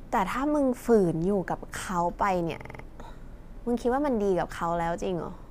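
A system hang loop runs from 2.60 to 2.83 s. The system stalled while the sound hardware kept replaying its ring buffer, so a 46 ms slice of speech repeats five times at 21.5 Hz, which fits a 2048-sample buffer. The result is a rapid stutter, and about a fifth of a second of speech is lost.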